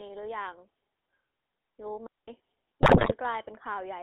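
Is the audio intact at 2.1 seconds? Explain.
No. From 2.07 to 2.28 s a digital wireless dropout cuts the speech: the receiver lost too much data and muted for about 210 ms with a very short fade, leaving a clean hole of near silence with no noise burst at either edge. Underneath, the GSM full-rate codec degrades the whole clip, including this moment. It models the vocal tract and drives it with a coarse pulse excitation, giving a plainly audible buzzy, gravelly roughness in a band of 250 Hz to 3.6 kHz, which fits the 13 kbps GSM full-rate codec.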